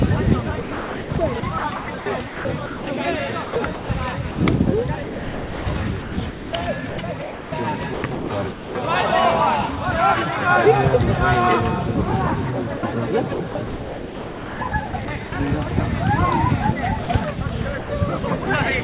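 The sender's voice detector is likely switching transmission on and off repeatedly, producing sound chopped by the voice detector from 0.62 to 2.87 s, 3.44 to 4.37 s and 5.03 to 8.75 s. Stretches of about 1.1 s, 0.33 s and 1.9 s are swapped for comfort noise, so the audio stutters. At 12.77 to 12.83 s the detector likely mistakes sound for background and stops sending, giving sound dropped by the voice detector: a 60 ms gap of steady noise. Chopping returns from 13.34 to 15.32 s, where about 1.1 s is replaced. More sound dropped by the voice detector follows at 17.03 to 17.09 s, 17.78 to 17.90 s and 18.44 to 18.47 s, each a brief blink of noise lasting 30 to 120 ms. Throughout, nothing is heard above 4 kHz, which fits a narrowband call codec.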